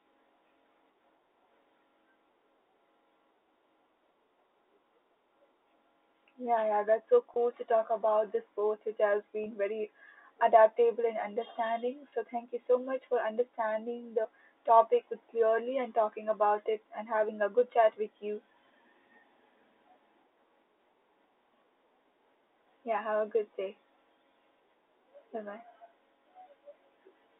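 At 7.34–7.36 s, between "yeah that's so" and "to talk about this", a packet loss with pitch repetition occurs, with about 20 ms of audio missing. The receiver fills the gap by replaying the last pitch period, so the speech briefly holds on a slightly buzzy sustained tone. The same brief smear recurs at 9.44–9.46 s, after "this sport which has", and at 12.10–12.12 s, after "very adaptable and understanding". All of this sits inside a G.711 A-law telephone band of roughly 300 Hz to 3.7 kHz.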